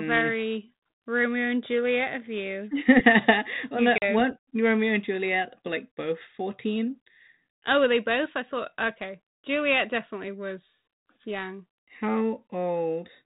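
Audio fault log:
3.98–4.04 s, packet loss on an ADPCM call: about 40 ms of the speech, roughly a couple of packets, drops out and is filled with silence, leaving a hole with abrupt edges. The 32 kbit/s G.726 stream sends only differences from an adaptive prediction, so after the gap the decoder's predictor and step size no longer match the sender's. The speech returns with some distortion before settling within some tens of milliseconds.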